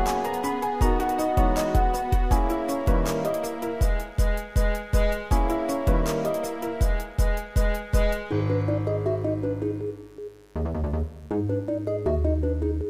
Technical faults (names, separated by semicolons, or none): mains buzz